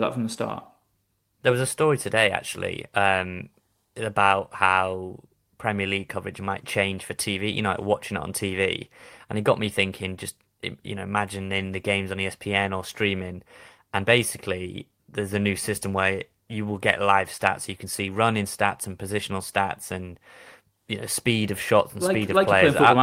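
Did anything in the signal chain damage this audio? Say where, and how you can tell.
No, nothing in the chain damaged this speech recording.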